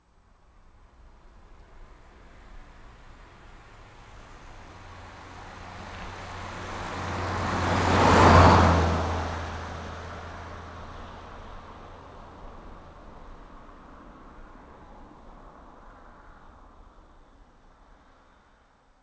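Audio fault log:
No faults heard anywhere in this recording.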